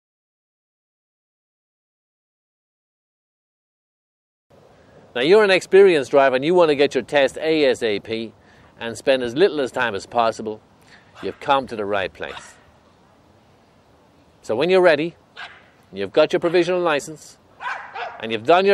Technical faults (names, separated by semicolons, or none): none